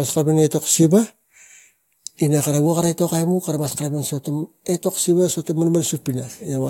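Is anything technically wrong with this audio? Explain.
Yes. From 2.66 to 5.07 s the speech runs 6.13% fast and 103 cents sharp, then snaps back. This is likely a drift correction step, where clock-matching software briefly changed the playback rate to rebalance its buffer. On a spectrogram the harmonics step up together, then drop back.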